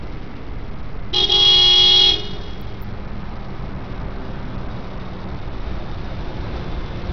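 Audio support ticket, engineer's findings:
Treble flickering and thinning for the whole clip, with a gritty, grainy layer riding on the audio and nothing above 16.3 kHz. Heavy damage, likely Bluetooth SBC compression on the link, starved for bits, which fits a low bitrate around 64 kbps. Top sub-bands get few or no bits and drop in and out. Remaining bands coarsely quantised, leaving grit and some aliasing on top.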